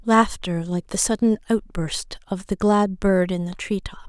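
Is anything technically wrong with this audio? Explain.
No, no technical faults here.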